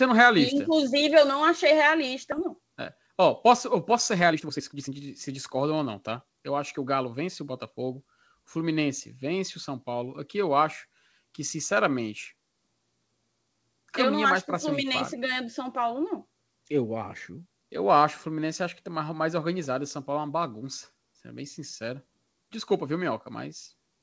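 Speech carried over a call link, with nothing heard above 8 kHz, which fits G.722 at 64 kbps. At 2.32 s, right after "não achei", there is a skip ahead. About a second of speech is simply gone. Later audio was already queued, so playback jumped straight to it. The two sides butt together with no gap. From 3.92 to 7.97 s, after "posso eu", a jitter buffer speed-up sets in. The buffer held more audio than it wanted. It trimmed many tiny pitch-period slices, roughly half a second in total. Speech runs at 114% speed, same pitch, noticeably hurried.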